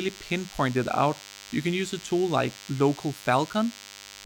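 From start to end, a DECT cordless phone buzz sits under the speech: a nearby handset or base station transmits a radio burst every 10 ms, rectified into a thin, steady 100 Hz buzz roughly 20 dB below the speech. A spectrogram shows evenly spaced horizontal harmonic lines at 100 Hz intervals.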